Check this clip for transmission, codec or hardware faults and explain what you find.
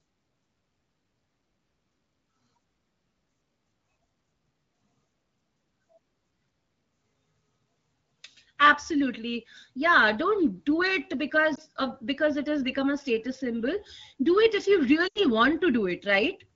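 One fault is audible: lost AMR speech frames, heard twice. At 11.56 to 11.60 s about 20 ms drops out, consistent with one frame, and the result is a brief dip. At 15.07 to 15.19 s about 80 ms is lost, which fits four consecutive frames. Radio errors caused those frames to fail their checksum. The decoder filled the gap by repeating the last good pitch and spectral envelope at a decreasing gain, so the sound drops to near silence within two frames before recovering weak or rough. The underlying wideband coding is clean and consistent with AMR-WB at around 12.65 kbit/s.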